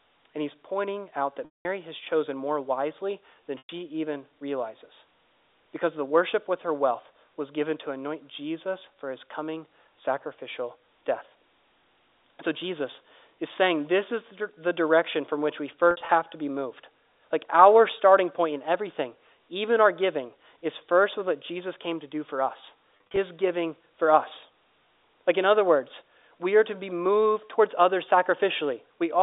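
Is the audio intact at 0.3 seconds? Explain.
Yes, the speech at 0.3 s is intact, carried cleanly through G.711 telephone coding with its usual narrow line band and no fault at that moment.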